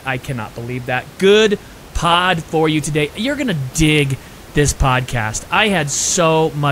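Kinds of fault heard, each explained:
No kinds of fault are heard in this clip.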